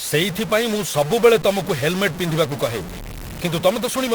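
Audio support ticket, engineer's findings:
Harsh, buzzy distortion on speech across the whole clip; pauses filled with steady noise instead of silence. Likely a stuck bit in the converter or data line, fairly high-order: values offset by a fixed step around -25 dBFS, flipping with signal sign.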